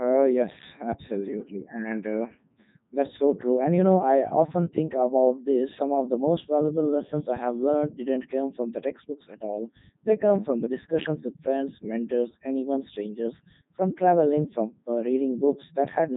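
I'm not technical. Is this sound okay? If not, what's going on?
No. From start to finish the speech has been through a Codec 2 vocoder, a very low-rate digital-radio voice codec. It doesn't keep the actual voice. It sends a rough description (pitch, loudness, tone colour), and the receiver rebuilds the voice from simple tones, which is why it sounds robotic and buzzy. A plain phone line sounds muffled but still human. Here the voice itself is synthetic, and nothing above about 3.8 kHz remains.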